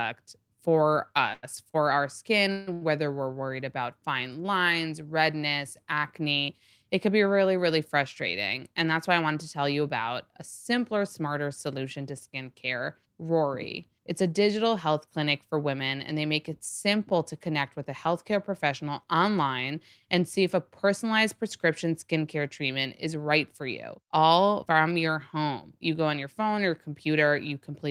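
From 1.33 to 2.83 s the speech shows repeated stalls (stutter): packets arrived late, the jitter buffer ran dry four times, and the receiver stretched the last sound to fill 360 ms, the longest gap 154 ms. Nothing is lost, but roughly a quarter of that stretch drags and hiccups.

Jitter buffer speed-up follows at 8.84 to 9.82 s, where the buffer had overfilled and the receiver trimmed short pitch-period pieces, about 70 ms in all, running at 107% speed. At 25.13 to 25.80 s the same happens at 105%, removing around 50 ms. Pitch holds, but the speech sounds briefly hurried.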